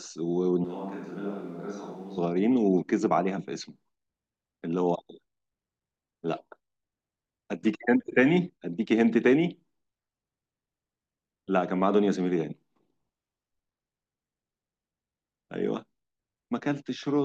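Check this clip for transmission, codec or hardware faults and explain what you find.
One fault shows up, right near the start. From 0.64 to 2.18 s the speech suddenly goes roomy and hollow, loses its low end and drops by roughly 10 dB, with the background noise coming up to around 30 dB below the speech. It then snaps back just as abruptly. That's the signature of a switch to a distant microphone: most likely the close mic's feed dropped out and a farther one, picking up far more room, covered that stretch.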